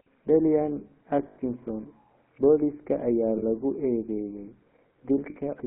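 The whole clip runs through the GSM full-rate codec, and the damage is plainly audible: a buzzy, gravelly roughness from the pulse-driven vocal-tract model, with the band held to about 200 Hz to 3.4 kHz, which fits the old 13 kbps full-rate coder.

Then there are lost GSM frames at 1.28 s for 80 ms, at 3.38 s for 40 ms and at 5.3 s for 60 ms. Each time the decoder re-uses the last good frame's settings, so the sound is held as a short, rough metallic ring. The gap lengths point to four, two and three dropped 20 ms frames.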